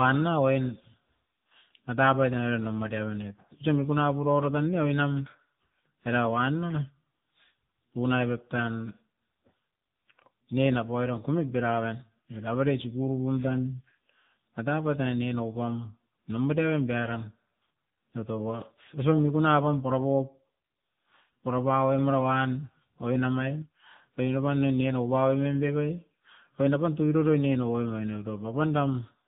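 AMR narrowband mobile codec damage runs through the whole speech clip, from start to finish. The codec rebuilds the voice from a vocal-tract model excited by a few pulses per 5 ms subframe, and everything above 4 kHz is gone, which fits narrowband 8 kHz sampling. The damage is plainly audible. The voice sounds muffled, buzzy and synthetic, with a thin, telephone-like edge, which points to one of the lower AMR-NB modes, near 8 kbps.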